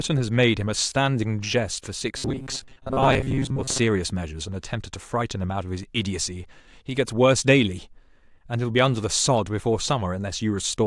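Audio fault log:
2.17 to 3.79 s, robotic sound from repeated short buffers: the speech turns into a stiff, metallic buzz stuck at 133 Hz. It's likely that audio arrived too slowly and about half of it was replaced by looping a roughly 7.5 ms chunk, which sets that pitch.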